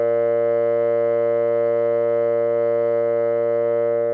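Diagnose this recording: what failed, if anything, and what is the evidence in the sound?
Nothing in this music recording points to a failure at any stage of the chain. There is no audible evidence of a fault to trace to wiring, conversion, buffering, processing, transmission, storage or playback.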